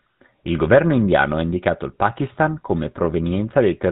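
From start to finish the speech carries GSM full-rate codec damage, plainly audible: nothing above 4 kHz, and a buzzy, gravelly roughness from the pulse-driven excitation, consistent with a 13 kbps rate.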